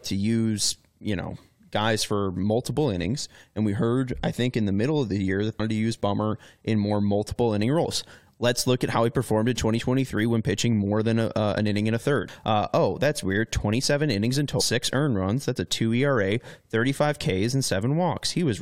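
At 5.59 s, after "of the year that", and 14.60 s, after "innings in", damaged data in a compressed stream throws the decoder off sync: a brief glitch of under 20 ms each.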